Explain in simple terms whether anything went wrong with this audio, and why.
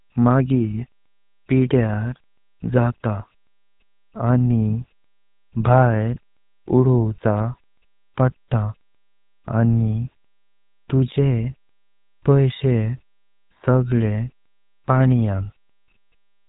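The speech passed through the GSM full-rate codec, an early mobile-phone coder that rebuilds speech from coarse pulses and discards everything above 4 kHz, leaving it buzzy, gravelly and muffled throughout.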